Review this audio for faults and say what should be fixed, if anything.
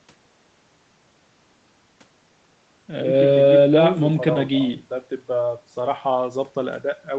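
No faults turn up in this audio, so nothing needs to be fixed.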